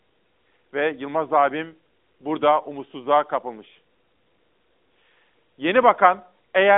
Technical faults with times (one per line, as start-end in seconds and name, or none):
none